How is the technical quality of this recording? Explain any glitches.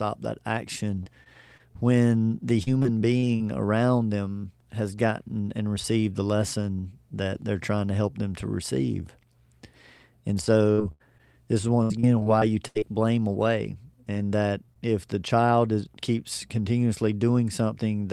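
The recording is marred by three bursts of choppy, robotic sound. Repeated packet loss (robotic sound) occurs at 1.03–3.42 s before "around them has gotten", at 10.72–12.84 s before "blame away", and at 14.14–14.77 s between "blame away" and "if the child is". Data went missing again and again, and each hole was patched by extending the preceding sound. The gaps run up to 40, 82 and 20 ms. The middle burst is the most damaged, with about a fifth of it filled in, so it sounds choppy and broken, with pieces missing.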